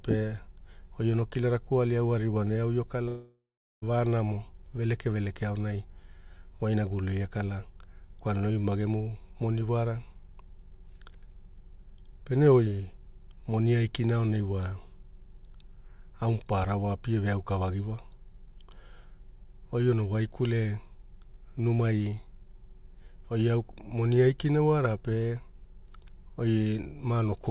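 It's a speech recording, and there are two things to flag. Right after "aririwana eau io", at 3.08 s, the sound cuts out until about 3.84 s. That's a long network dropout: most likely a run of packets never arrived, so the receiver smeared the last bit of sound into a buzzy tail that fades. Roughly the last 0.39 s of the gap is just silence. When the sound picks up again, that whole stretch, about 0.74 s, is simply gone. The second one is a single sharp click at 9.05 s. It's a dropped-samples glitch, likely a tiny fraction of a millisecond of waveform going missing, so the signal jumps straight to a later value. The loss is too short to take out any sound, but the discontinuity pops. Everything is band-limited to 4 kHz, which fits the narrowband G.711 mu-law call path it went through.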